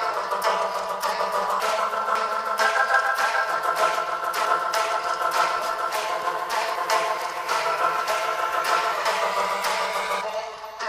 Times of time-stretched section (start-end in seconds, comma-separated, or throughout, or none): none